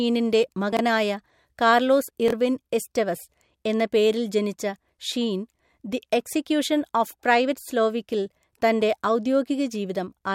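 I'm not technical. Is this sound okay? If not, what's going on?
No. At 0.73 s and 2.28 s, small pieces of speech play in the wrong order. These chunks out of order cause brief jumbled moments.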